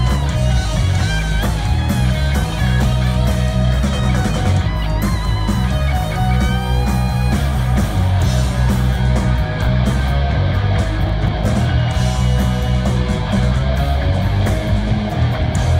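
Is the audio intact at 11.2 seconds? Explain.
No, 11.2 s falls inside a burst of processor overload crackle from 11.07 to 11.45 s. The processor misses several very short buffer deadlines in a row, each skip leaving a hard-edged gap, so the sound gets a gritty, tearing crackle until the load eases.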